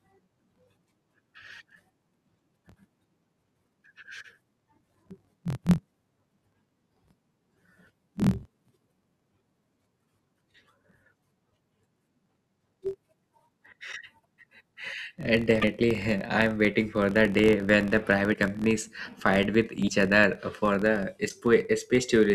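A low buzz at about 43 Hz runs under the whole speech, swelling and fading with its level. It comes from a filter restarted on every block: each block, which fits a 1024-sample size, starts from silence and leaves a small tick.

Short chirps, bursts of noise or holes, each about 30 ms long, break in at 13.91–13.94 s, 15.61–15.64 s, 18.33–18.36 s (after "the day when the", before "companies fight with"), 19.87–19.90 s (after "companies fight with") and 21.28–21.31 s. These are likely a broken MP3 bit reservoir: after a cut, the 26.1 ms frames reach back for borrowed data and decode bytes from the wrong frame.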